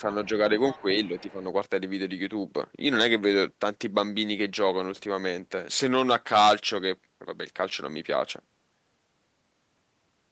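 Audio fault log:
0.71–0.82 s and 1.05–1.21 s, other side's voice leaking through: A faint second voice appears, about 15 dB then 30 dB below the talker. Likely residual loudspeaker echo the canceller missed.
0.79–0.85 s and 1.09–1.42 s, speech suppressed in double talk: The talker's level dips by about 10 dB, briefly then for about a third of a second. Likely the canceller ducking during overlap.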